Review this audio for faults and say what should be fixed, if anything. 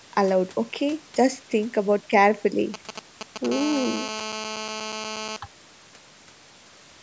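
A nearby 2G phone was exchanging short signalling bursts with its network, and the audio circuit rectified that radio energy. From 2.74 to 3.46 s, GSM signalling bursts break in as a galloping dit-dit-dit of brief 217 Hz buzzes, roughly 10 dB below the speech.

A 2G phone then went into a call, transmitting continuously at 217 bursts per second, which the circuitry again demodulated. From 3.52 to 5.37 s a steady GSM phone buzz sits under the speech: a hard, raspy 217 Hz tone rich in harmonics, about 9 dB below the speech.

Keeping mobile phones well away from the microphone, cables and recording gear, or switching them to flight mode, will prevent both.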